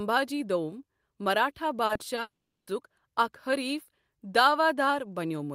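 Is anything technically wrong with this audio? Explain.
Yes. From 1.85 to 2.19 s, repeated packet loss (robotic sound) leaves four short holes of up to 40 ms, patched by repeating sound. It sounds choppy, with smeared, repeated slices on a spectrogram.

From 2.21 to 2.69 s, a long network dropout is the likely cause. About 0.46 s is lost: a brief fading buzz, then roughly 0.39 s of flat near-silent waveform before "اَکھ حریف".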